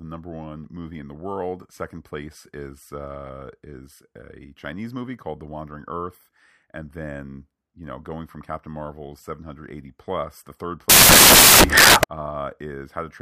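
A speech clip. From 10.90 to 12.04 s the samples are built from the wrong bytes. The bytes of each sample are misassembled, so the low, fast-changing bits dominate. This produces a burst of loud, harsh broadband noise over the audio.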